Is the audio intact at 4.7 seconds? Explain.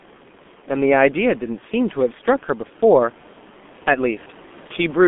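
No. From 4.67 to 4.73 s there is VoIP packet loss concealed by the speech codec: about 30 ms went missing, consistent with a single frame. The decoder filled it by extrapolating its last pitch and filter, giving a brief fading stretch rather than the silent hole of a plain dropout.

The G.723.1 codec is also heavily audible there, as throughout. The band is held to 200 Hz–3.5 kHz, giving muffled, hoarse, smeared consonants, which fits a rate around 6 kbit/s. This damage is steady, not momentary.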